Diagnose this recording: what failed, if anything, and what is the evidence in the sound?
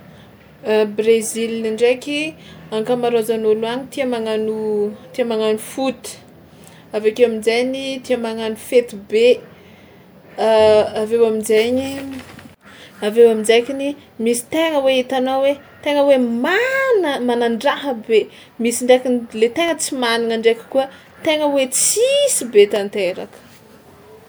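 Periodic USB or driver dropouts at the driver or buffer stage. From 19.68 to 23.78 s, about five small ticks sound in the speech, exactly 1.024 s apart. Each time, something blocked the audio path and about a millisecond of signal was replaced with silence.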